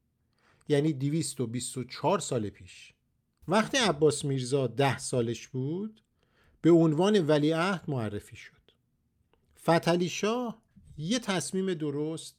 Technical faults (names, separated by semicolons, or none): none